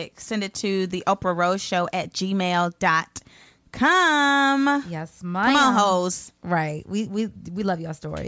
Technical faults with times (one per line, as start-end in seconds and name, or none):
none